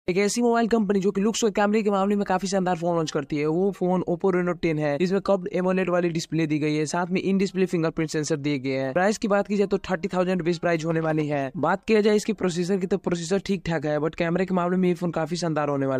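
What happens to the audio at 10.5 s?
Nothing goes wrong at 10.5 s, and the audio plays through that point intact.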